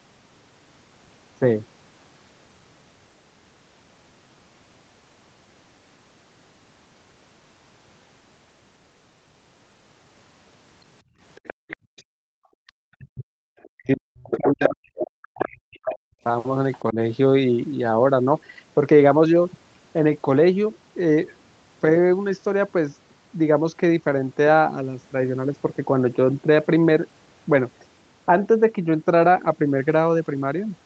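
From 11.03 to 12.28 s the room background is gated by the echo canceller: for roughly 0.7 s in total it sinks by about 40 dB and then returns.

Within that dip, from 11.35 to 12.03 s, a second voice at roughly 20 dB below the talker is heard. More faint fragments come at 13.63–13.69 s and 16.73–16.79 s. A far louder stretch, only about 5 dB under the talker, runs from 14.31 to 15.95 s. This is likely the other side's voice leaking through. It is a separate voice, not a repeat of the talker's own sound, so it is not a plain echo of the near end.

Between 12.56 and 16.25 s the talker's voice dips by up to about 40 dB, for roughly 2 s in all, and again briefly at 16.92–16.98 s by about 15 dB. This is likely speech suppressed in double talk: the dips track the overlapping far voice, unlike codec loss, and the band stays limited to 8 kHz throughout.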